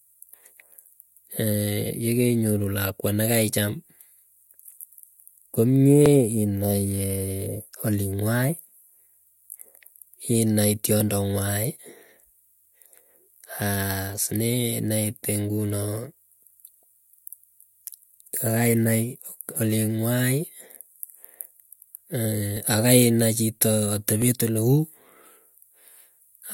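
Two clocks likely drifting apart by roughly 700 ppm make the buffer between them slip, dropping or repeating a small block that fits about 50 samples. These clock drift buffer slips click through the speech every 1.65 s, about fifteen times, from 1.10 s to 25.87 s.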